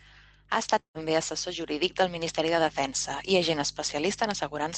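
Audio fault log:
0.79–0.98 s, long network dropout: the sound smears into a buzzy tail that fades over about 150 ms, sinks to near silence, then resumes with roughly 160 ms of audio gone. This is likely a packet gap the receiver papered over before giving up.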